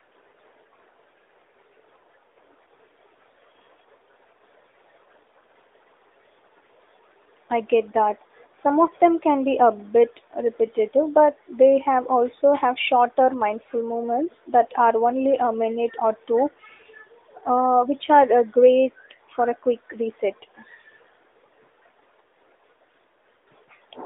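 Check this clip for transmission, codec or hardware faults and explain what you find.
No transmission, codec or hardware faults turn up anywhere in this speech clip. It carries the narrowband sound of an AMR mobile link, with the telephone band running from about 300 Hz to 3.7 kHz, nothing above 3.8 kHz, and only light coding texture that fits the 12.2 kbps mode.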